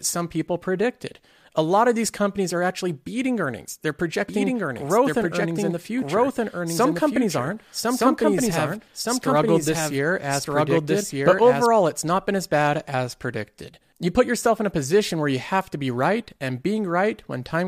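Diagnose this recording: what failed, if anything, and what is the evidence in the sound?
A doubled audio track runs from 4.28 s to 11.66 s, starting abruptly just before "it's not been as". A second full-band copy of the speech trails the original by about a second at much the same level, with no decay or room colour, likely from a slower second capture path or an edit stage holding two misaligned copies.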